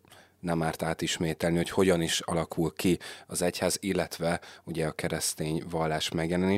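Speech with one repeated buffer at 2.24 s, between "átismételni hogy hogyan is" and "ki az egyház illetve". Fresh audio failed to reach the playback device in time, so it played its previous buffer a second time. That buffer is only about 5.8 ms long, which fits a 256-sample buffer, so the doubled piece comes out as a click with a hard join rather than an audible stutter. No speech seems to go missing around it.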